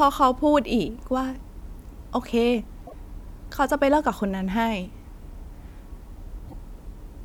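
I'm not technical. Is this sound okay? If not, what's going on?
No. Two short glitches at 2.84 to 2.93 s and 6.47 to 6.54 s come from damaged data in a compressed stream. The decoder misreads broken bytes and loses its place.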